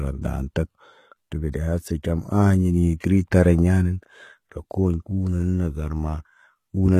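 From start to finish, the treble sounds bright but gritty and metallic, and s sounds turn lispy. The likely cause is HE-AAC compression, which points to a bitrate around 20 kbps: the upper band is rebuilt from copied lower bands rather than coded directly.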